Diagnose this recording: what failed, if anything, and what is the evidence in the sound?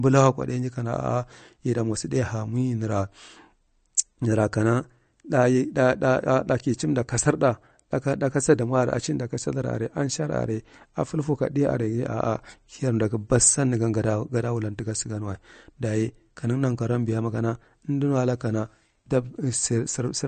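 The codec stage shows MP3 compression throughout the speech: nothing sounds above 8.6 kHz, sibilants are chirpy and watery, and weak detail swirls frame to frame. The bit-starved encoder likely cut the treble and zeroed quiet spectral lines, which fits roughly 40 kbps.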